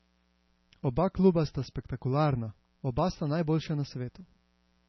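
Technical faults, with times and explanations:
Throughout, mains buzz: a steady, raspy buzz sits under the speech, roughly 40 dB below it, built on a 60 Hz fundamental with harmonics climbing into the kilohertz range. Its rasp comes from sharp current spikes entering the audio path twice per mains cycle, from a dimmer, a rectifier or a missing shield, so the hum is a dense comb of 60 Hz multiples that never lets up rather than a smooth tone.
Throughout, MP3 compression: the speech sounds watery and swirly, with metallic chirps on s sounds and smeared attacks, and nothing is left above 6 kHz, which gives the voice a dull, band-limited edge. The damage is heavy and likely comes from MP3 coding at a low bitrate, consistent with about 24 kbps. Starved of bits, the encoder zeroed weaker frequency lines that flicker on and off between frames and cut the treble at a fixed point.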